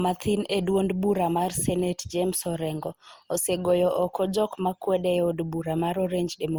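From start to finish the speech has a swirly, hollow, smeared quality, with consonant attacks going soft in a way the bitrate alone wouldn't explain. That's generation loss, likely from the audio being run through Opus at what sounds like 64 kbit/s about four times over. Each re-encode quantises again on a shifted frame grid, so noise piles up, even though content still reaches about 20.1 kHz.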